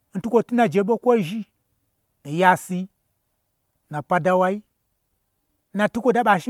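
Throughout the speech, the signal has most likely been through generation loss: decoded and re-encoded around five times with MP3, at a rate that fits 128 kbit/s. Each pass quantises the audio again on a shifted frame grid, so the coding noise and spectral gaps pile up. The result is a swirly, hollow, smeared quality beyond what a single encode at that rate would give, with blurred attacks, while the band still reaches about 20.1 kHz.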